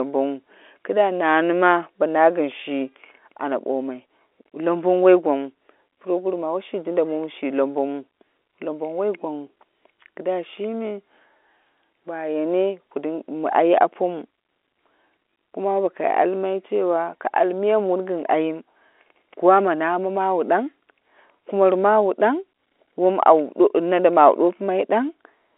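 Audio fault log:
Nothing in this speech clip calls for a log entry, with the ordinary telephone-line sound of G.711 coding, limited to roughly 300 Hz to 3.5 kHz, being just how the line carries it.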